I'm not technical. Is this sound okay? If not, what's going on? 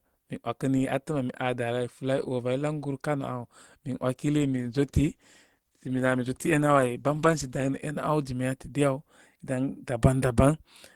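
No. A call bitrate drop runs from about 4.39 to 7.83 seconds: the connection looked weaker, so the call squeezed the speech into far less data. It sounds rougher and muffled there, then clears once the connection recovers.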